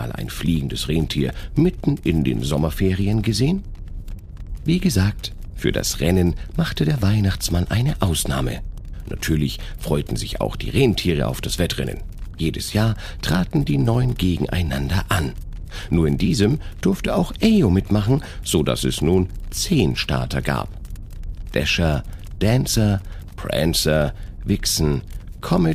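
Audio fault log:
No faults detected anywhere in this recording.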